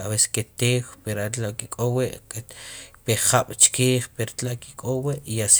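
At 2.53 s there's a bit error spike: a flipped bit in memory or on a digital link throws three consecutive samples off by a power of two, peaking around -28 dBFS, then snaps back. You hear one sharp, broadband tick with no relation to the speech.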